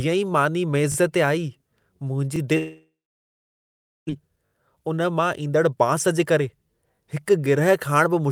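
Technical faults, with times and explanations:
0.92–0.96, 2.36–2.38, 4.46–4.52 and 6.96–6.98 s, repeated buffer: fresh audio arrived late, so playback replayed its last block, which fits a 20 ms buffer. Each time a tiny slice sounds again with hard joins, heard as a quick stutter, the first just before "ते आई".
2.57–4.11 s, long network dropout: the stream most likely stopped delivering packets for about 1.3 s. The receiver briefly stretched the last sound into a fading buzz, then about 1.17 s of near-silence followed before the audio resumed with that stretch gone.
4.2–6.41 s, jitter buffer speed-up: after the gap, audio backed up in the jitter buffer, leaving it about a fifth of a second behind. Playback trimmed many pitch-period slices to catch up, so this passage runs at 109% speed without any pitch change and sounds hurried.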